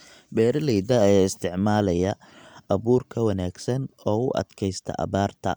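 No technical faults can be heard anywhere in this speech recording. At no point does anything in the audio stand out as a problem with how it was captured or delivered.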